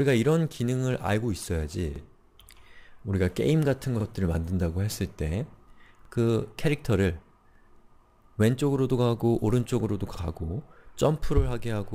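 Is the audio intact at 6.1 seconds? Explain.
No. Overlapping chunks disturb the audio from 6.05 to 6.1 s. The stream is handled in 2.0 s chunks, and this one starts before the previous one finishes. About 48 ms of sound plays twice at the join, heard as a brief stutter.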